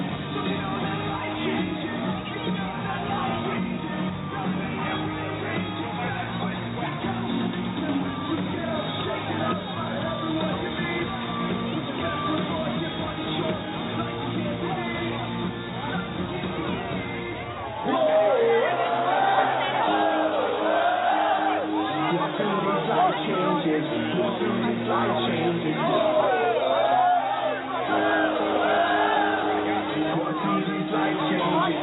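No technical faults are audible anywhere in the audio.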